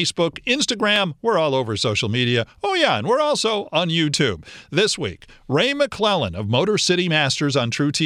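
No technical faults can be heard anywhere in the speech.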